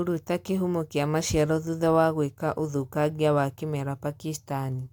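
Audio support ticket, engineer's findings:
No technical faults found in the speech recording. Nothing to log against any component.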